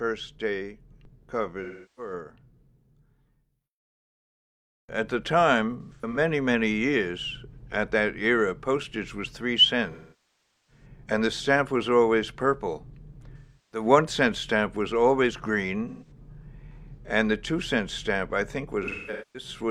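AAC frame loss with concealment hits at 1.63, 5.81, 9.91, 13.37, 15.88 and 18.83 s. The decoder rebuilds missing frames from the last good spectrum, giving smeared, phasey patches, choppier at 5.81 and 18.83 s. The 0.77 s gap at 9.91 s sags toward silence and fades back.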